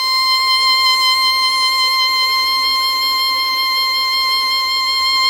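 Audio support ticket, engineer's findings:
Listened through the music clip a couple of times and found nothing to chase here, so no fault to log on this one.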